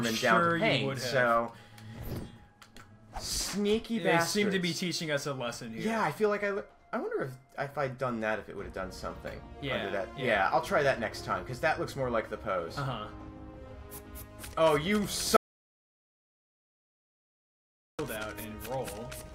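Audio dropout to silence from 15.36 to 17.99 s: the sound cuts to silence with no room tone, 2.6 s lost, likely from a dropped input link.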